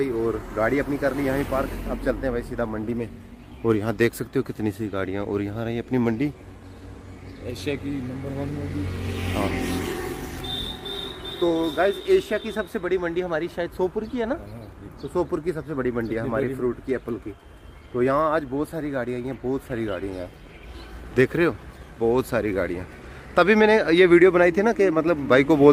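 No technical faults are audible anywhere in the recording.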